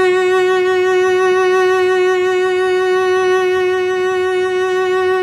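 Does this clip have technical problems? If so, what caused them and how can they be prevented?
No, this music clip has no audible technical problems.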